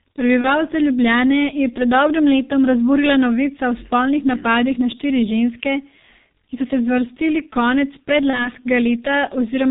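Speech coded through the G.723.1 codec throughout, with heavy damage: the band stops at 4 kHz, the voice is muffled and hoarse, and consonants smear because the 30 ms frames update the voice model slowly, consistent with a rate near 6.3 kbit/s. VoIP packet loss concealed by the speech codec appears at 0.41–0.54 s and at 8.30–8.52 s, just after "so se zvrstili konec". Each fits a single lost 30 ms frame that the decoder filled by extending its last pitch and filter into a fading buzz or coloured noise, with the voice staying weak until about 0.13 s and 0.21 s after onset.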